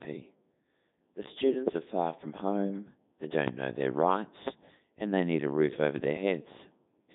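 The whole clip has gone through the Codec 2 vocoder, rebuilt from sine waves, so the speech is robotic and buzzy, with nothing above 3.8 kHz. That fits its 3.2 kbit/s mode.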